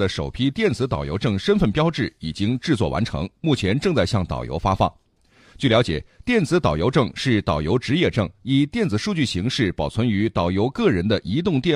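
Nothing here stands out as a technical fault anywhere in the speech.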